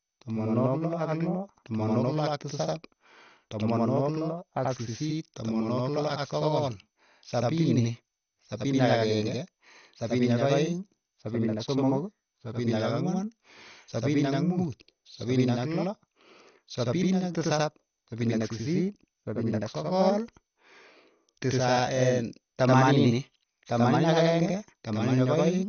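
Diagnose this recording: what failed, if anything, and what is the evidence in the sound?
Every syllable of the speech arrives twice, about 85 ms apart, from start to finish. That is a channel delay (doubling) fault at the driver or buffer stage. One channel ran late by a whole buffer. The gap fits a 4096-sample buffer. The two channels were then summed to mono. The late copy sits at the same level as the original. So it reads as a distinct slap echo, not as room reverberation.

The sound is also dull and gurgling throughout. Nothing reaches above 6.5 kHz. The remaining bands sound grainy and coarse, and upper detail flickers in and out. This is codec damage, plainly audible across the whole clip. The likely cause is MP2 compression at a low bitrate, around 48 kbps. Layer II splits the signal into sub-bands and starves them of bits. The top bands shut off entirely. Those left are quantised roughly, which gives the granular texture.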